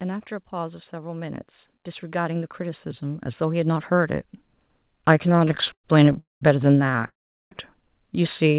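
From 0.5 to 4.32 s the speech and its background swell together by about 14 dB. This is automatic gain rising: the gain control judged the input too quiet and lifted its gain gradually.

Between 5.29 and 6.18 s the speech drags and stutters through 19 brief stalls, the longest 101 ms, covering about a third of that stretch. This is repeated stalls (stutter): packets arrived late, the jitter buffer kept running empty, and the receiver stretched the last sound until more arrived. Nothing is lost, but the speech falls behind.

From 6.19 to 6.42 s the audio stops for 0.22 s, mostly falling silent, then resumes where it left off. This is a call audio freeze, likely caused by packets held up in transit that emptied the buffer.

From 6.90 to 7.05 s five short stutters follow, none longer than 18 ms.

From 7.06 to 7.52 s a longer freeze holds the speech for 0.45 s, nearly all of it silent, before it picks up again.

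Throughout, the G.711 call path keeps everything below 4 kHz.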